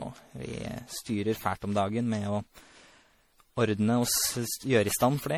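From start to finish the speech carries generation loss: a swirling, hollow quality with smeared consonant attacks, more damaged than a single lossy pass would leave it. The character points to a low-rate MP3 chain around 64 kbit/s, likely decoded and re-encoded about ten times. Each pass requantises on a shifted frame grid, so noise and spectral gaps accumulate, even though content still reaches up to about 20.6 kHz.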